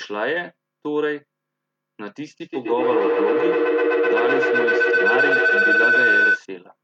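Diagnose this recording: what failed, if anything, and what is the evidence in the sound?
A feedback howl sets in at 2.41 s and runs to 6.47 s. The microphone-to-loudspeaker loop gains level on each pass, so the repeats grow instead of decaying and narrow to a tone of around 1.5 kHz. It peaks at about 7 dB above the speech and pulses roughly every 150 ms, the loop's delay. That points to two devices in one room on the same call. A spectrogram shows a thickening horizontal line near 1.5 kHz, and the waveform swells in periodic bursts.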